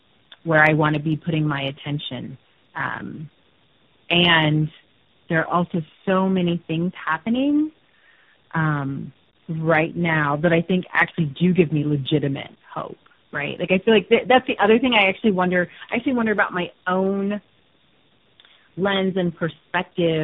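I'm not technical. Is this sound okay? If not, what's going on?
No. The whole recording, start to finish, has what's called tandem speech coding. The call passed through a chain of phone links, and at each border the voice was unpacked and squeezed again, three times by speech codecs. Each squeeze worked on an already worn copy, so the speech sounds rougher and noisier, with a muffled, warbly quality. On top of that, nothing comes through above about 3.7 kHz, which takes the crispness off the voice.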